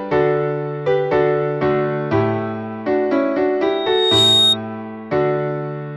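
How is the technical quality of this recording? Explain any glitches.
The recording has one clear fault: a loudspeaker feedback squeal from 3.62 to 4.57 s. A microphone picked up its own loudspeaker, and the loop gain exceeded one near 3.7 kHz. That tone swells over roughly half a second to about 5 dB above the rest of the sound. The gradual build-up is what separates it from a steady interference whistle, which would start at full level.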